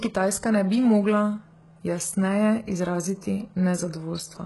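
Speech, with HE-AAC compression damage throughout. The treble is heavily synthesised and stops sharply at 11.5 kHz. S sounds turn gritty and metallic. This likely comes from band replication copying lower bands upward, which fits a very low bitrate near 12 kbps.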